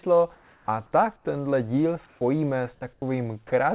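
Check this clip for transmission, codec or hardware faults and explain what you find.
The speech shows voice-detector gating faults, heard over a narrowband call path whose band ends at 4 kHz, consistent with G.711 A-law.

Comfort noise in place of the background at 0.35–0.68 s, 1.16–1.25 s and 2.06–2.21 s: the real room tone turns to steady, featureless hiss, about 8, 17 and 2 dB quieter. The likely cause is discontinuous transmission, with the receiver synthesising filler rather than falling silent like a dropout.

Onset clipped by the voice detector at 0.65–0.68 s and 2.19–2.21 s: speech jumps in abruptly, missing 30 and 20 ms of its start. The detector likely reacted late, so the cut comes from comfort noise, not a fade-in.

Sound dropped by the voice detector at 2.93–3.02 s: about 50 ms of speech gives way to steady noise. It was likely mistaken for background, unlike packet loss, which would leave a glitch or concealment artefact.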